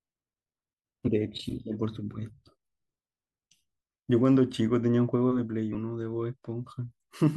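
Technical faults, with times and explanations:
1.07–1.09 s and 5.72–5.75 s: compressed frames skipped. The speech jumps forward, dropping about 20 ms and then about 40 ms of audio, a whole number of frames each time.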